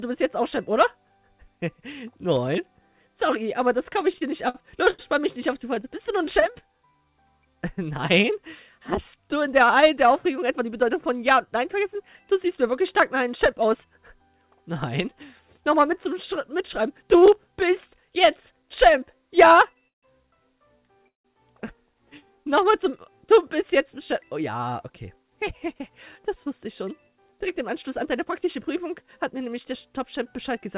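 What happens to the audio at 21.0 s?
At 21.0 s the sound is inside a run of repeated stalls (stutter) lasting from 19.74 to 21.26 s. Packets arrived late, so the jitter buffer emptied six times, and the receiver stretched the last sound to cover about 344 ms, roughly a quarter of that span, with the longest hold near 163 ms. Unlike packet-loss dropouts, nothing is missing: the audio drags and hiccups, then resumes where it stopped, still band-limited to 4 kHz by the call codec.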